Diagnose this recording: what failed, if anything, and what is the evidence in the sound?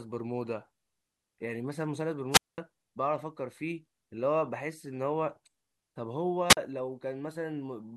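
A rise of hiss followed by near silence cuts the speech at 2.31 to 2.58 s, with about 210 ms muted, and again at 6.49 to 6.57 s, with 43 ms muted. This is a wireless microphone squelch dropout: the FM radio link faded and the receiver's squelch muted the output until the signal recovered.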